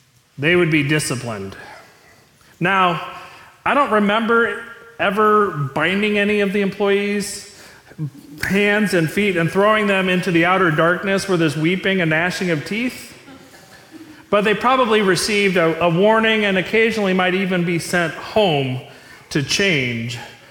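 Listening closely, nothing in the audio stands out as a technical fault.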